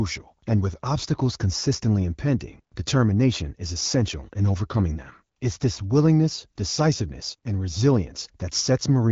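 The speech shows no technical faults, and its content stops at about 7.5 kHz, consistent with an AMR wideband (HD Voice) codec path running at 12.65 kbit/s.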